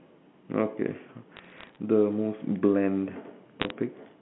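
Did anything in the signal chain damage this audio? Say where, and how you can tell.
Yes. Bit errors on a digital phone line show up as two bursts of sharp ticks and crackle, from 1.37 to 1.77 s and again from 3.60 to 3.70 s. The speech itself is unchanged, and it carries the narrow telephone band of a G.711 A-law path. The damage happened in transmission. Flipped bits in the 8-bit log-coded samples, at a rate of a few tenths of a percent, each corrupt a single sample, and hits on sign or high-order bits throw out isolated clicks.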